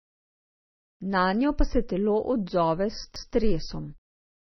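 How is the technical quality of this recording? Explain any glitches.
The recording has two problems. One affects the whole clip. The other is a single glitch near the end.

Low-bitrate audio saved at a high bitrate: Nothing is heard above about 5.9 kHz, so the speech sounds dull and smeared. The file was likely a very low-bitrate MP3 first, then re-encoded at a high bitrate. The second pass cannot restore the lost detail.

Repeated buffer: From 3.16 to 3.34 s, a piece of speech about 186 ms long plays twice. There is a hard join where the repeat begins, heard as a short stutter. Fresh audio arrived late, so the device replayed its last buffer, which fits an 8192-sample buffer. Little or no speech is missing.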